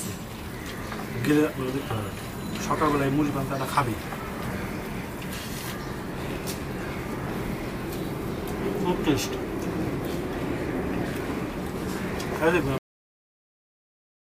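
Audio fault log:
12.78 s, cut-off end: the sound stops partway through and falls straight to digital silence for the remaining 1.6 s, with no decay or tail, because the last stretch of audio was never written out or played; a natural ending or fade-out would taper gradually instead.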